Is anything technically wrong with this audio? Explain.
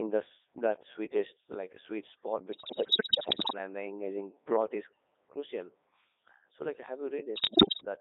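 Yes, there are two problems. The whole clip has gone through a Codec 2 vocoder at 3.2 kbit/s, confined to roughly 250 Hz to 3.7 kHz. The decoder rebuilds the speech from sine waves using only pitch, voicing, energy and spectral envelope, so it comes out heavily robotic and buzzy.

On top of that there are bit errors on digital voice radio, from 2.52 to 3.58 s, between "like a sweet spot" and "and the engaging", and again from 7.36 to 7.85 s, after "like have". Flipped bits corrupt whole vocoder frames, so pitch, level and timbre jump around into warbles and gibberish. The second burst sounds worse, which fits an error rate around double that of the first.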